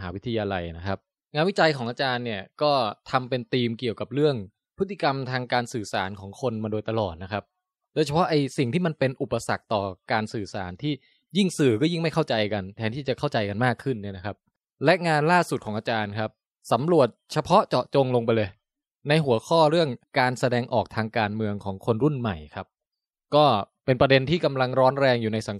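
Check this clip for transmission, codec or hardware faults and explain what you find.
Nothing in the speech signal points to a transmission, codec or hardware problem.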